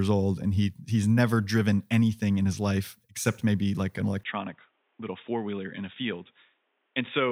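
A speech recording in which, from 4.23 s to the end, right after "except maybe like an", the sound turns dull and boxy and drops about 10 dB, with a faint new noise floor well below the speech. The likely cause is the input switched to a poorer device mid-recording, one passing a narrower band. A spectrogram shows energy cut off sharply at 3.8 kHz with no gap at the switch, and the waveform's envelope visibly shrinks there.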